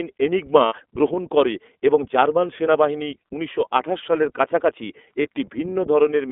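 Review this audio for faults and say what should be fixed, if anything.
The whole recording passes through the iLBC codec, with plainly audible damage. The band runs only from 250 Hz to 3.5 kHz, and each 30 ms frame is coded on its own, which fits the 13.33 kbps mode. The result is a rough, slightly synthetic speech texture. Unlike a generic low-pass, the graininess changes with each frame. To prevent it, route the call over a wideband codec such as Opus.

There are lost iLBC frames at 0.66–0.74 s, just before "গ্রহণ করে এবং জার্মান", and at 5.22–5.27 s, just after "উনিশশো আঠাশ সালের কাছাকাছি". The decoder repeats the last pitch cycle mixed with noise, producing a held, buzzy vowel. That fits two lost frames at the first time and one at the second. Unlike a hard dropout, there is no silence, and the voice recovers almost at once. To prevent it, add jitter buffering and forward error correction on the network path.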